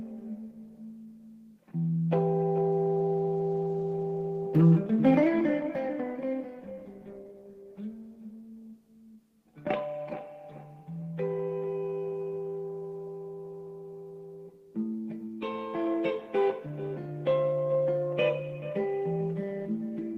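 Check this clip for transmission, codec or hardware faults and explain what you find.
No transmission, codec or hardware faults can be heard anywhere in the clip, and the signal stays continuous and steady throughout.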